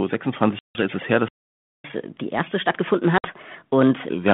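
At 0.59 s the speech drops into a hard-edged hole lasting until 0.82 s, just before "ist es her". This is packet loss on an ADPCM call: about 160 ms of audio, which points to roughly fifteen short packets, was replaced by silence. Because each G.726 sample encodes only a difference from an adaptive prediction, the receiver's predictor and step size lose track of the sender's. The speech therefore comes back slightly distorted before settling.

From 1.28 s to 1.84 s, right after "ist es her", the sound stops for about 560 ms. This playback stall, likely the player running short of data or its thread being blocked, differs from the packet loss in how it ends. The audio simply resumes, without the predictor mismatch that follows an ADPCM dropout.

From 1.84 s to 4.09 s the player works off its backlog with catch-up at higher speed. It plays at 1.25 times normal speed, which raises the pitch by roughly four semitones. 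Tempo and pitch rise together, as resampling does, unlike a pitch shift that keeps the timing. Both return to normal at 4.09 s.

Within that fast stretch, at 3.18 s to 3.30 s, a second packet loss on the ADPCM call cuts out about 60 ms, roughly seven packets. The same predictor mismatch leaves the speech slightly distorted on return until it settles. Throughout, the 32 kbit/s G.726 line confines the sound to about 150 Hz to 3.5 kHz.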